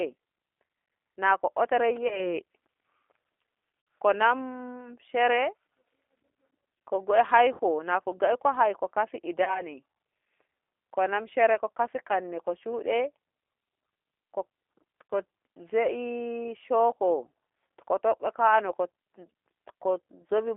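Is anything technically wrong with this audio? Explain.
Yes, there are two kinds of problem.

The whole speech clip runs through a G.729-style codec, and the damage is plainly audible. The band sits between roughly 300 Hz and 3.5 kHz. The speech is rebuilt from a filter, a pitch predictor and a few pulses per frame, which fits an 8 kbit/s G.729A link. That's why it sounds rough and a bit synthetic.

There's also VoIP packet loss concealed by the speech codec, at 2.08–2.29 s, 3.81–3.87 s, 7.53–7.61 s (just before "nako ngoi ko haiho"), 9.44–9.62 s (right after "ngoi ko haiho fasi") and 15.1 s. About 30 or 60 ms of audio went missing each time, which fits one or two lost packets. The decoder stretched its last pitch and filter into a fading buzzy tone or coloured noise, and the sound stays weak for a moment after each gap.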